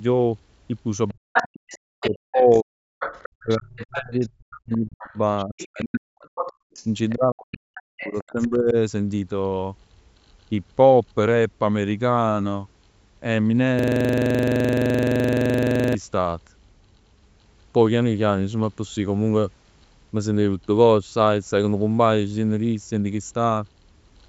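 From 1.08 to 2.59 s a second voice sits under the main talker, only about 5 dB down. This is the other side's voice leaking through, most likely loudspeaker output that the echo canceller failed to subtract from the microphone signal. It returns from 2.99 to 7.14 s at around 15 dB below the speech, and again from 7.52 to 8.48 s, quieter still at about 20 dB down.

Overlapping these stretches, the main talker is pulled down while the far end is active: from 1.13 to 2.91 s, from 3.43 to 6.16 s, and from 7.14 to 8.76 s. Each episode is speech suppressed in double talk, likely the canceller treating near-end speech as echo and attenuating everything. The voice drops by as much as roughly 40 dB at worst, totalling around one and a half to two seconds per episode.

From 6.53 to 6.73 s the room sound itself dips by about 34 dB for roughly 200 ms, then recovers. That is background gated by the echo canceller: during loudspeaker playback it clamped the microphone path hard, so the ambience briefly drops out before the canceller releases.

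From 13.79 to 15.95 s a system hang loop takes over. A 42.67 ms slice of audio repeats exactly, about fifty times, at a loop rate of 23.4 Hz. This fits a 2048-sample ring buffer being replayed while the host or driver was frozen. The result is a rapid mechanical stutter, close to a coarse buzz, with no forward progress in the audio until it releases.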